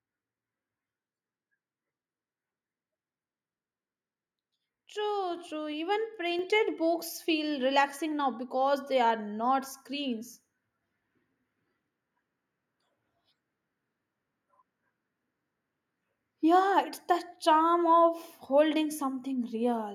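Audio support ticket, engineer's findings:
Speech and background jump louder together in one step at 5.37 s, then again at 6.39 s, about 4 dB each. Microphone volume stepped up: call software's input-gain control judged the mic too quiet and raised the device's input volume in discrete increments.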